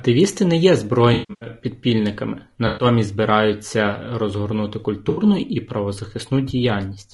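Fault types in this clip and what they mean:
Low-delay AAC compression: The whole speech clip sounds rough and grainy, with noise filling the gaps between voice harmonics and a thin, synthetic top band. This is likely short-frame AAC-ELD coding, and the clear damage fits a bitrate around 32 kbps.
AAC frame loss with concealment: The decoder rebuilt missing frames from earlier spectrum, leaving smeared, noisy, phasey patches at 1.13 to 1.48 s (about 260 ms lost over 280 ms, longest run roughly 150 ms), 2.67 to 2.85 s (100 ms) and 5.09 to 5.23 s (80 ms).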